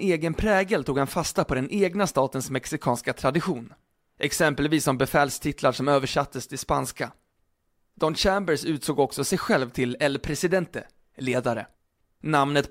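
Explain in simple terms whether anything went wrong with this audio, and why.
Nothing went wrong here.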